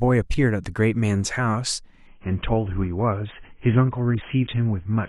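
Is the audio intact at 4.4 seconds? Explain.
No. From 2.07 s to 5.08 s, the adaptive stream drops to a lower bitrate as the connection slows. The speech switches abruptly, without a gap, to a dull, artefact-laden sound with nothing above 3.7 kHz. That fits a fall from about 96 to 16 kbit/s AAC.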